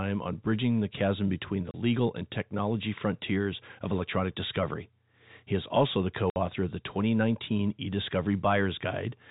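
Packet loss filled with silence at 1.71 s and again from 6.30 to 6.36 s: the speech drops to dead silence for 30 ms, then for 60 ms, which points to one and then two lost 30 ms packets with nothing concealing the gaps. Each hole opens and closes with a hard edge, so the speech is briefly chopped, heard through the narrow telephone band of the G.711 coding.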